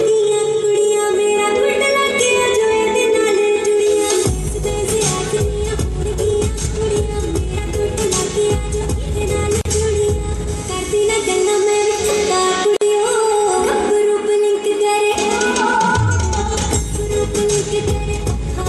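At 9.61 s the sound drops out for about 39 ms, then again at 12.77 s for about 49 ms. Each is a gap at a join of encoded pieces. Separately encoded pieces kept their padding and start delay. The edges are smeared, and the sound resumes where it stopped.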